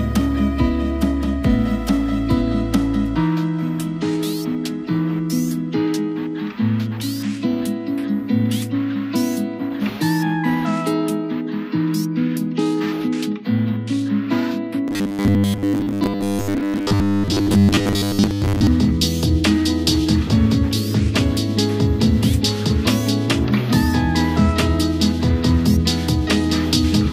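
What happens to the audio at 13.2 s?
Nothing goes wrong at 13.2 s; the audio plays through that moment intact, with no dropout, click, glitch or other fault.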